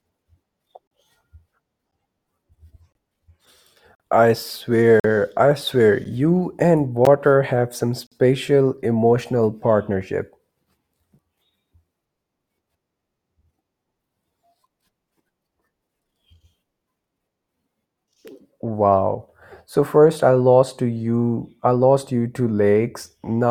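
Speech breaks into hard-edged silences at 0.87, 1.91, 2.92, 3.95, 5.00, 6.04, 7.05 and 8.07 s. This is a gap between stream segments: one-second segments don't quite join, so silence fills the holes. Each hole lasts about 9 to 49 ms, and none of the speech is lost.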